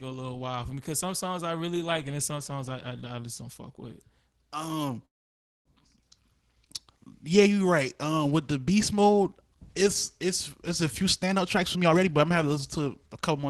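From 5.05 to 5.68 s there is a call audio freeze, likely because packets stalled in transit and the jitter buffer ran dry. The last sound is carried on only briefly before dropping to silence for most of that 0.63 s gap. The speech then resumes exactly where it stopped, with nothing lost, but it now runs about 0.6 s later than before.

From 11.03 to 12.88 s a jitter buffer speed-up follows, as the receiver works off a backlog of buffered audio by repeatedly cutting out pitch-period-sized slices, around half a second in total. The speech plays at 127% speed with unchanged pitch and sounds noticeably rushed.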